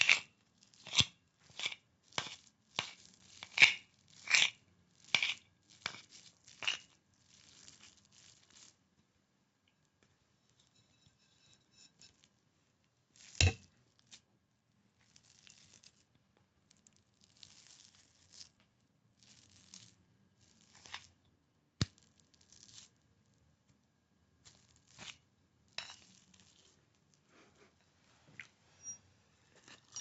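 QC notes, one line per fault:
No faults heard in this sound recording.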